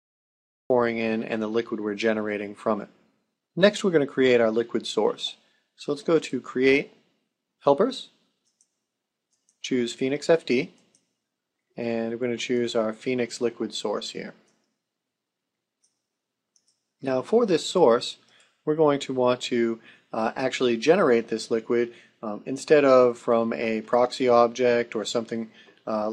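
Cut-off start, 0.70 s: the first 0.70 s is pure digital silence, and then the audio arrives abruptly in the middle of a sound rather than building up from its beginning. Capture or streaming started too late, so whatever preceded that instant was never recorded. The result is an opening with no natural attack or fade-in. The level jumps straight from nothing to full signal, as though the sound had already been running before the recording caught it.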